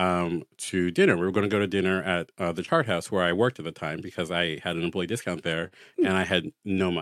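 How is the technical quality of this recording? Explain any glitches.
No glitches can be heard anywhere in this speech recording. There is nothing technical in it that needs explaining.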